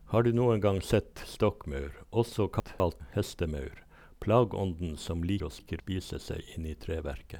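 At 2.6 to 3.0 s, right after "gang sett stokkmaur også", a 200 ms chunk of the speech arrived one chunk late and was played after the chunk that should follow it. That is chunks out of order. Nothing is missing, but the two pieces swap places, creating three hard joins and a brief jumbled stretch before "hestemaur plageånden som". The same swap recurs at 5.4 to 5.8 s, just after "hestemaur plageånden som".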